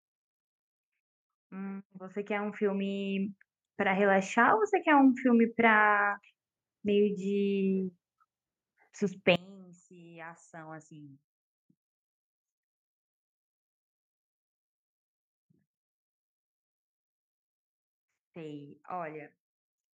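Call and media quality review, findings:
Automatic gain rising, 1.49 to 5.14 s: AGC judged input too quiet, ramped gain up about 13 dB over roughly 3.6 s. Speech and background noise swell together, no sudden step.

Automatic gain rising again, 9.89 to 11.24 s: same AGC stage, smaller correction, about 5 dB over about 1.4 s. Speech and background swell together, more briefly.

From 9.36 s to end: mono sum drops about 24 dB, centred speech nearly gone, only a faint residue left. Likely one channel inverted, so shared content cancels when channels are summed.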